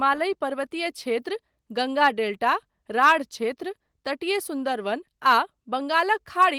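No faults occur in this speech clip: the audio passes through Opus voice compression at 24 kbps in hybrid mode with a fullband response reaching about 20.2 kHz, and only light coding texture is audible.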